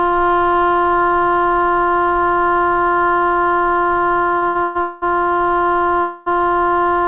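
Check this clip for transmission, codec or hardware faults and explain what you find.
The clip has two kinds of transmission fault, both clustered between 4.38 and 6.31 s, heard through a call path whose band stops at 4 kHz, which fits 64 kbps G.711 mu-law.

Short stall from a late packet, at 4.38 to 4.44 s and 4.48 to 4.57 s: a packet arrived late, the jitter buffer emptied, and the receiver stretched the last sound for 40 ms and then 69 ms before resuming at the same point. You hear a brief hold with a faint buzz or dip. Unlike a packet-loss dropout, nothing is skipped afterwards.

Call audio freeze, at 4.63 to 4.77 s, 4.81 to 5.04 s and 6.01 to 6.31 s: the sound hangs as a fading buzz or hiss for 121, 207 and 253 ms, never reaching true silence. The likely cause is packets held up in transit while the jitter buffer ran dry, with playback then carrying on from where it stopped. These fills are longer and audibly decay, unlike the short stalls' brief hold.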